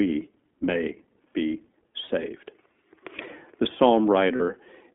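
The whole speech clip passes through the iLBC codec. The band runs only from 250 Hz to 3.5 kHz, and each 20 ms frame is coded on its own, which gives the plainly audible rough, slightly synthetic texture and fits iLBC's 15.2 kbps mode. Unlike wideband codecs, nothing reaches above 4 kHz.

At 2.06 s and again at 4.36 s, lost iLBC frames leave gaps of about 40 ms each, which fits two 20 ms frames. The decoder fills each gap by repeating the last pitch cycle with added noise, so it sounds like a brief held, buzzy vowel rather than a click or silent dropout. The voice is right again almost at once afterwards.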